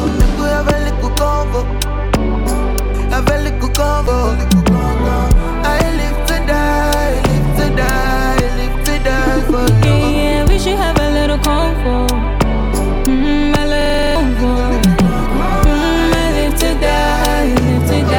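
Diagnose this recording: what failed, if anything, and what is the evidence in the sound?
Damaged data in a compressed stream hit the codec stage at about 4.04 s. Part of the encoded stream arrived corrupted, so the decoder misread the affected frames and lost sync until it found the next valid frame header. What reaches the ear is a brief chirp, squawk, click or short hole lasting roughly 40 ms, ending at 4.08 s.

A system hang loop at the driver or buffer stage begins at 13.81 s. The host froze while the audio hardware kept replaying the same ring buffer. A 42.67 ms slice repeats exactly eight times, a rate of 23.4 Hz, which fits a 2048-sample buffer at 48 kHz. This produces a rapid machine-gun stutter running to 14.16 s, and about 300 ms of fresh audio that should have played there never arrives.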